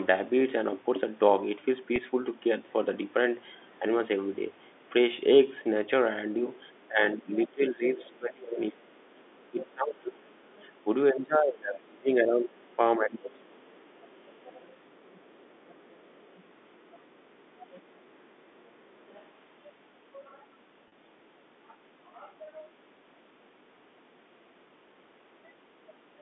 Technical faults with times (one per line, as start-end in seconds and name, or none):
1.96-1.98 packet loss with pitch repetition
6.62-6.88 other side's voice leaking through
6.88-13.54 speech suppressed in double talk
8.03-10.68 other side's voice leaking through
12.59-17.80 other side's voice leaking through
19.08-19.25 other side's voice leaking through
20.88-20.92 packet loss with pitch repetition